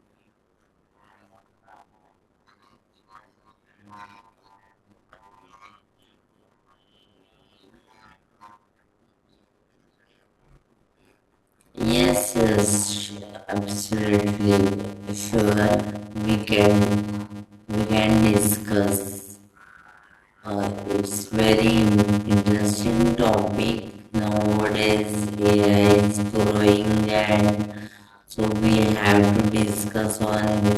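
Block size mismatch (padded) throughout: short blocks, which fits 256 samples, are zero-padded, so the speech buzzes at 100 Hz and runs at 0.533 speed, timbre unchanged.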